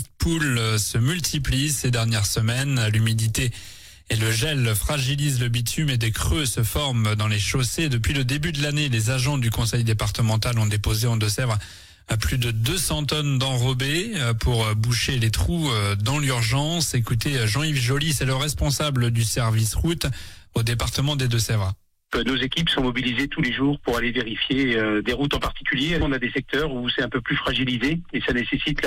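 Nothing here calls for a fix, since no technical fault turns up anywhere in the audio.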